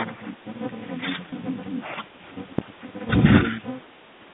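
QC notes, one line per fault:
1.30 s, packet loss with pitch repetition: a brief gap of about 20 ms, which fits a single lost packet, is bridged by repeating the last pitch period and fading it out. Because the gap is short, the sound is only slightly held and buzzy.
2.59 to 2.81 s, phantom power thump: a supply switched on or off on a live input sends a sudden voltage step through the coupling capacitors, producing a deep low thump that dies away with a decay of about 51 ms.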